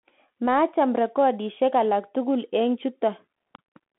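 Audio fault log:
throughout, Bluetooth CVSD headset codec: the speech is squeezed into a telephone-style band of roughly 200 Hz to 3.4 kHz, with nothing above 3.8 kHz, which fits a 64 kbps CVSD headset link. The coder sends one up-or-down bit per sample and adapts its step size. When the signal moves faster than the step can follow, it distorts, so s sounds turn scratchy and a granular hiss sits under the speech. The damage is plainly audible.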